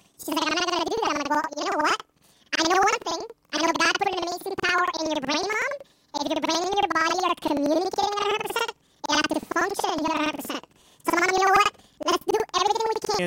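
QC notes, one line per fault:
throughout: planar audio read as interleaved. Blocks holding all left then all right samples are read as alternating pairs, so each 93 ms block plays twice at double speed. The speech sits an octave high and flutters at 10.8 Hz, which fits a 4096-sample block.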